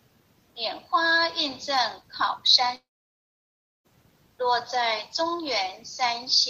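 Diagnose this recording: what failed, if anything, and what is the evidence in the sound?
At 2.75 s the sound collapses into a short, fading buzz, then near-silence for about a second before resuming at 3.86 s, with roughly 1.1 s simply gone. This is likely a long network dropout: packets stopped arriving, concealment briefly extended the last sound, then gave up.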